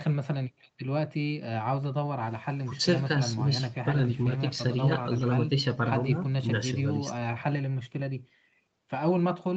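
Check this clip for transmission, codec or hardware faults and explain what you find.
Nothing here sounds like a transmission, codec or hardware problem: the speech comes through the call's microphone processing and codec path as expected, with the top end stopping around 8 kHz, just what a wideband call setting like Opus at modest bitrate would give.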